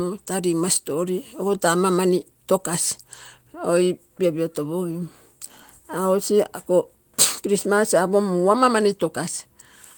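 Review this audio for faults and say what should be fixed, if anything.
Nothing needs to be fixed, as there are no faults in this audio.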